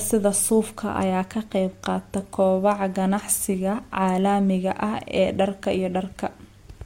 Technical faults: none

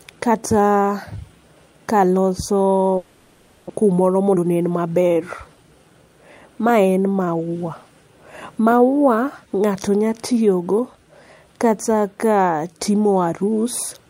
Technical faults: long network dropout; jitter buffer speed-up

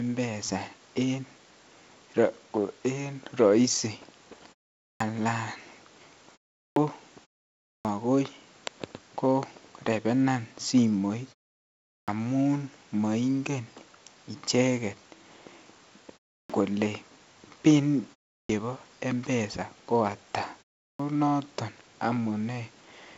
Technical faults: clipped start after a pause

